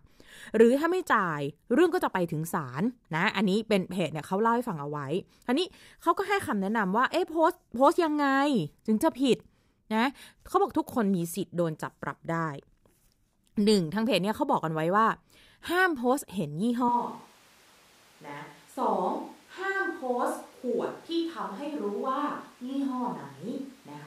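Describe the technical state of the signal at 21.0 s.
At 21.0 s the speech is on a distant microphone. The switch comes abruptly at 16.89 s and holds to the end. The close microphone's signal likely dropped out. The sound turns roomy and hollow, about 5 dB quieter, with audible room noise.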